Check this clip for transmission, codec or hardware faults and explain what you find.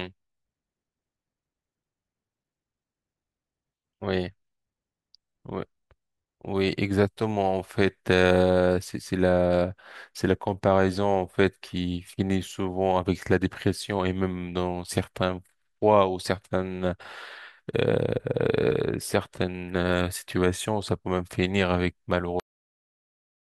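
Cut-off end at 22.40 s: the final buffers were never written out, so the speech halts mid-sound and drops straight into digital silence with no decay.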